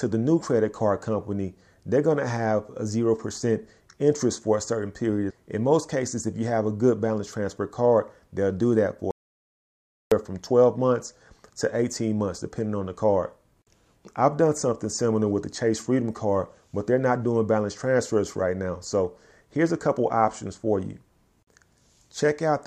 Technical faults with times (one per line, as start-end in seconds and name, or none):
9.11-10.12 audio dropout to silence